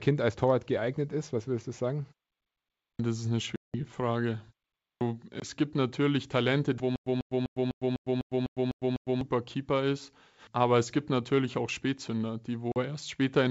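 Speech over a G.722 wideband link at 64 kbit/s, with three distinct faults. Twice a clipped start after a pause swallows the onset of speech: at 2.72–2.99 s about 270 ms is lost after a 0.67 s pause, and at 4.75–5.01 s about 260 ms after a 0.31 s pause. The output path was asleep during the silence and took that long to wake, so speech begins abruptly without its first sounds. Packet loss on an ADPCM call appears at 3.56–3.75 s (180 ms, around ten packets), 5.40–5.46 s (20 ms, about one packet) and 12.72–12.77 s (40 ms, a couple of packets). Each is a hard-edged hole, and the speech that follows comes back slightly distorted, settling within some tens of milliseconds as the decoder's predictor and step size drift back into line with the sender's. That recovery tail marks it as a codec-state problem rather than a simple dropout. From 6.96 to 9.21 s there is a stutter with silent gaps: one 145 ms fragment plays nine times, each followed by about 106 ms of digital silence, on an even period of about 250 ms. 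The likely cause is a stalled player replaying its last buffer on each retry. Unlike the packet losses, the same sound repeats, and the audio meant for that stretch never arrives.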